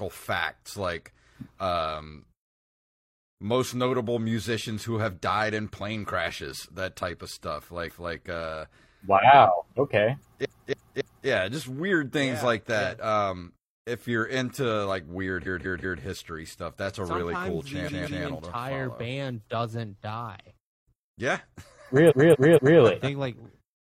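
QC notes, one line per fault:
7.85–8.13 s, repeated frames: after "that type of stuff", a 279 ms block plays one extra time before "uh wow okay yeah", adding 279 ms as a stutter.
10.41–11.24 s, repeated frames: after "uh wow okay", a 279 ms block plays three extra times before "yeah just weird things", adding 836 ms of stutter.
15.42–15.98 s, repeated frames: after "you're into like weird", a 186 ms block plays three extra times before "history stuff that's a", adding 557 ms of stutter.
17.84–18.21 s, repeated frames: a 186 ms block plays two extra times, so the same short stretch stutters and the audio runs 372 ms longer.
22.06–22.76 s, repeated frames: a 232 ms block plays three extra times, adding 697 ms as a stutter, which points to a run of duplicated compressed frames.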